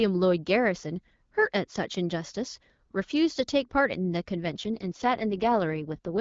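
From 4.42 s to 6.20 s the speech turns rougher, raspier and more synthetic, with no gap and no change in bandwidth. This is an AMR rate drop: the wideband (HD Voice) AMR-WB codec, which sounds lightly coded and clear before the change, is pushed down to a lower mode with fewer bits for the vocal model. The added roughness fits a step from 12.65 kbit/s to 6.6 kbit/s, and it lasts to the end.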